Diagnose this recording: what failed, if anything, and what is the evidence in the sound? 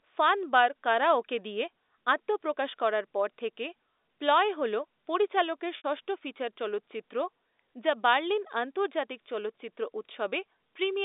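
At 5.77 s, just after "থেকে 'প্লয়' হল পরিচালকের", the speech briefly holds on a slightly buzzy, frozen tone for about 70 ms before resuming at 5.84 s with "ষষ্ঠ ফিচার চলচ্চিত্র". This is packet loss with pitch repetition at the network stage. The receiver bridged the missing audio by looping the last pitch period, and the gap length points to several consecutive lost packets. It is heard through the narrow 300 Hz to 3.7 kHz telephone band of the G.711 A-law coding.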